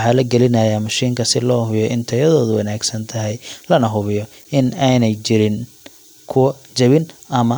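No technical faults can be heard anywhere in the speech recording; the signal stays steady and intact throughout.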